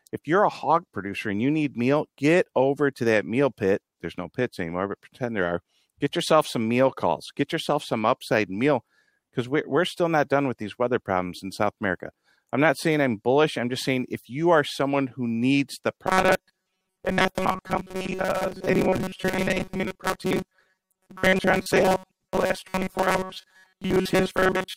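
From about 16.07 s, right after "someone who needs the", the speech goes robotic and stays that way to the end at 24.77 s. It's a stiff, metallic buzz locked at 188 Hz that still loosely tracks the words. That's robotic sound from repeated short buffers: the likely cause is fresh audio arriving too slowly, so a chunk of roughly 5.3 ms keeps getting replayed, and most of the real signal is skipped in that stretch.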